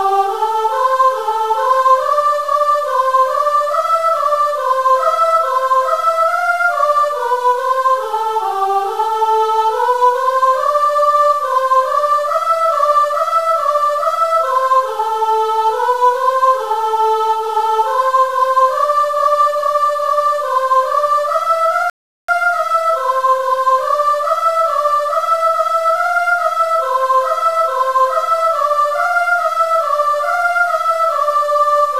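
From start to finish the sound carries distortion, with noise filling the quiet stretches, consistent with a stuck bit, likely one sample bit held at a fixed value. At 21.90 s a rebuffering stall cuts the sound to silence until 22.29 s. Playback then resumes exactly where it stopped, adding 386 ms without losing any material.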